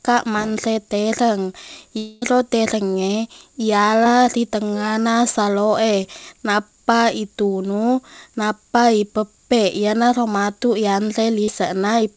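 Between 1.98 and 2.23 s there is what sounds like a long network dropout, most likely a stretch of about a quarter of a second in which no audio reached the receiver. The receiver stretched the last sound across the whole gap, so it never falls to silence. The sound turns into a smeared, fading buzz in place of the real signal, and when the audio resumes, that quarter second is simply gone.

Three short concealed packet losses follow, at 4.04 to 4.06 s, 6.03 to 6.05 s and 11.44 to 11.49 s. Each time, between about 10 and 30 ms of audio missed the decoder, and it patched the hole by extending the preceding sound before blending back into the real signal. Each one is heard as a brief wobble or smear, and a short consonant can drop out. All of this sits on a call codec band that stops at 8 kHz, which fits 64 kbps G.722.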